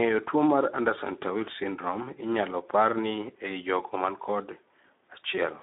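From start to end the speech carries Speex codec damage, plainly audible. With few bits left for the excitation, the CELP coder rebuilds the voice from a coarse approximation, so it comes out hoarse and noisy, which fits a setting around 11 kbps. The band runs from about 200 Hz to 3.7 kHz, with nothing above 3.8 kHz. A simple narrowband filter would sound muffled but clean. Here the grainy, rasping texture marks codec damage.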